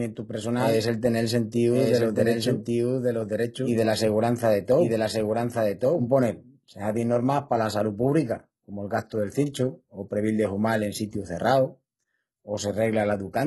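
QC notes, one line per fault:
throughout: HE-AAC compression, likely the cause of gritty, lispy sibilants; treble is rebuilt from lower bands, nothing above 11.8 kHz, consistent with heavy damage near 16 kbps.
0.00–6.08 s: doubled audio track, likely two copies out of step; a full-band repeat about 5 dB down trails by roughly one second, then stops abruptly, with no decay.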